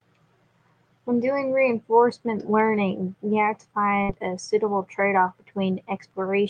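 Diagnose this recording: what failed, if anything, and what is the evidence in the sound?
The network stage dropped a burst of packets, a burst of packet loss from 4.03 to 4.12 s. The receiver extended the last speech sound for about 55 ms, fading it down, then resumed with roughly 60 ms of speech simply missing, so the sentence jumps ahead.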